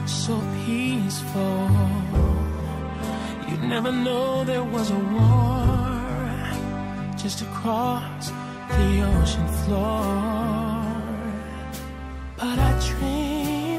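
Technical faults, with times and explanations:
2.82 to 6.82 s, adaptive stream at a lower bitrate: for about 4 s the treble abruptly loses its natural detail and turns hazy and synthetic, with nothing above about 12.3 kHz, then snaps back. This points to the player briefly dropping from a rendition around 96 kbit/s to one around 16 kbit/s, where the top band is rebuilt rather than coded. Unlike a dropout or buffering stall, there is no gap or pause. Unlike a steady low-pass filter, it switches in and out suddenly.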